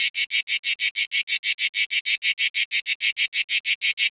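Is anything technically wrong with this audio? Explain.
Yes. Throughout the clip, a noise suppressor was applied to sounds it was never meant for. Built for speech, it treats steady tones and tails as noise, so levels pump by roughly 5 dB. The call-path band limit at 4 kHz, consistent with G.711 mu-law at 64 kbps, is normal.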